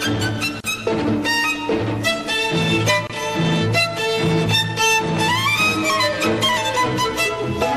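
The audio was likely encoded with MP3 at too few bits, so the encoder has dropped weak frequency lines that flicker on and off from frame to frame. The whole clip sounds plainly watery and swirly, with metallic chirping in the upper range and softened attacks, which fits a low bitrate around 64 kbps. Separately encoded pieces were also joined without trimming the encoder's start delay and end padding. This gap at a join of encoded pieces leaves two short holes of silence in continuous sound, about 37 ms from 0.60 to 0.64 s and about 25 ms from 3.07 to 3.10 s. Each has edges that the codec smears, and the sound then resumes exactly where it broke off.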